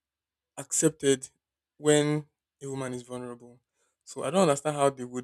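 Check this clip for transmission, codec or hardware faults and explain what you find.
Nothing stood out on listening to this speech recording.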